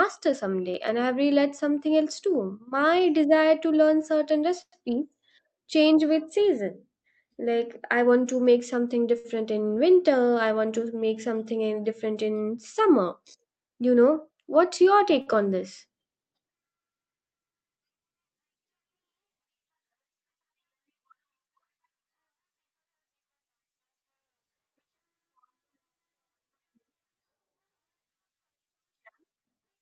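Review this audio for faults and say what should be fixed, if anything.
Call audio freeze at 4.61–4.74 s, right after "desire to learn certain": the last sound is held as a fading buzz or hiss for about 111 ms, including roughly 60 ms of silence, and then the speech resumes where it stopped with nothing lost. This was likely caused by delayed packets draining the jitter buffer.

Short stalls from late packets at 9.18–9.26 s, between "want to make something" and "in winter i want", and at 15.21–15.28 s, between "you know what's your" and "on this": each time a packet arrived late, so the receiver stretched the preceding sound by 60 ms and 51 ms with a slight buzz or dip, then continued from the same place.

To prevent these, reduce network jitter and packet delay on the call path, or allow the jitter buffer a little more target depth.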